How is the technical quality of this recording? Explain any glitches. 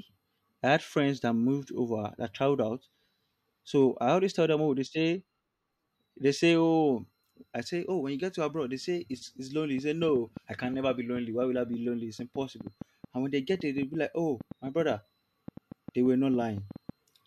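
A train of clicks mars the recording from 9.78 s, just after "say it's it's lonely", until 16.90 s. The cause is likely interference from nearby equipment or a faulty connection or power supply that keeps injecting short pulses into the signal, around 5.2 per second at an uneven pace and some forty in all. Each click has much the same shape and peaks about as loud as the speech, so an irregular ticking sits on top of the talking and carries on through the pauses.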